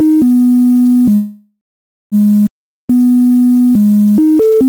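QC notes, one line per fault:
throughout: low bit depth without dither. The whole clip has a coarse, grainy distortion that moves with the sound. It is strongest on quiet passages, where the faintest detail breaks up or sputters between neighbouring levels. The grit fits a signal likely reduced to about 5 bits and rounded with no dither. The rounding error stays locked to the waveform, so it sounds like distortion that follows the signal. It sits roughly 30 dB below the signal.
1.15 to 2.15 s: call audio freeze. The sound stalls for about 0.96 s. The last moment carries on and fades, and then about 0.53 s of that span is silent. The audio then resumes exactly where it stopped, with nothing skipped. Everything after this point runs about 0.96 s late. This fits packets likely held up in transit, so the receiver's jitter buffer ran dry and it filled the wait until delivery resumed.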